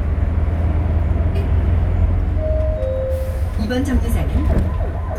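Nothing here stands out as a technical fault; the sound just carries on untroubled from the first moment to the last.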